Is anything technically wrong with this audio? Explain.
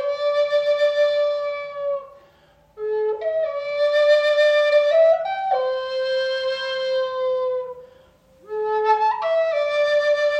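No, nothing stood out as technically wrong when listening to this audio.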